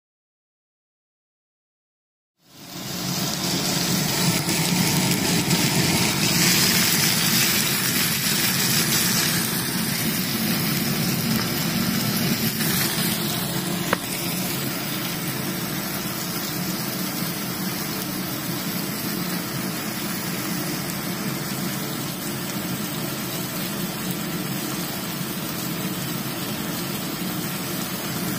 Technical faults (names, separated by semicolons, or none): none